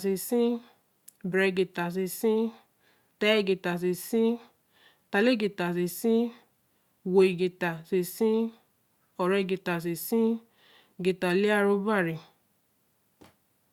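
No technical faults occur at any point in this speech clip, so there is nothing to place in time order.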